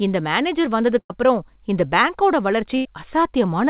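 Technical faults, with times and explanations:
1.0–1.11 s and 2.77–2.86 s, burst of packet loss: right after "இந்த மேனேஜர்", and again just after "அப்புறம் இந்த பேங்கோட", a run of call packets never made it in time. The receiver stretched the last bit of sound for about 95 ms and then 81 ms, fading it as it went, so you get a short held buzz or dying hiss. Then the audio picks up further along, with the missing stretch gone. It's all in a narrow band with nothing above 4 kHz, which fits a G.711 mu-law call path.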